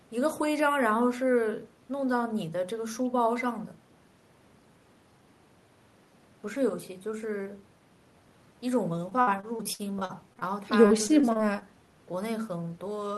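From about 9.09 to 10.43 s the speech breaks up with repeated packet loss, giving that robotic sound. Audio keeps going missing in short bursts, the longest around 60 ms and roughly 300 ms in all. Each hole gets papered over by stretching the last bit of sound, so it turns choppy. After a brief clean patch it happens again from 10.87 to 11.63 s, with shorter gaps of up to 24 ms.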